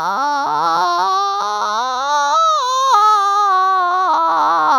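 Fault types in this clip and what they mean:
No fault types turn up in this music clip. None of the faults covered here can be heard anywhere in it.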